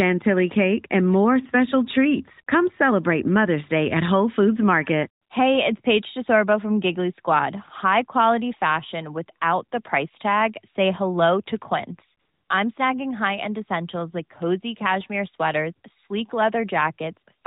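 At 5.24 s the real background drops out for 60 ms and a smooth, even hiss takes its place. At 12.20 s the same substitution lasts 300 ms and ends just before "I'm snagging". This is AMR comfort noise. The phone's voice activity detection judged the talker silent and stopped sending speech frames. The receiver then generated synthetic noise from a rough level and spectral outline, so the narrowband, lightly coded background is briefly swapped for artificial fill.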